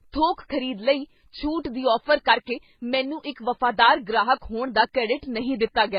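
Transcoding between lossy codecs runs throughout the speech clip. Nothing is left above 5.2 kHz, and the sound carries two layers of damage at once: swirly, smeared artefacts typical of a very low-rate MP3, overlaid with the metallic, hollow texture of a later HE-AAC encode. The cause is likely a chain in which a roughly 16 kbit/s MP3 was re-encoded to HE-AAC at roughly 24 kbit/s. The second encoder wasted bits reproducing the first one's errors, and the earlier band limit carried through.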